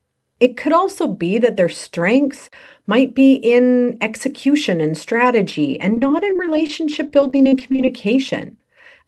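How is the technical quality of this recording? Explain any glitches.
The main glitch is a stretch of repeated packet loss (robotic sound) from 5.94 to 7.88 s. There the speech goes choppy. Around twenty short holes, none longer than 30 ms, get patched by carrying the last sound forward, so roughly half a second is rebuilt. The call path underneath sounds like Opus, with content reaching up to about 12 kHz.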